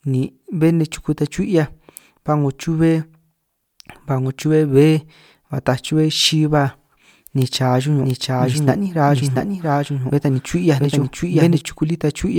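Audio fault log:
8.03 to 11.61 s, doubled audio track: the speech was likely captured twice, and a second equally loud copy trails about 0.7 s behind, starting and stopping abruptly.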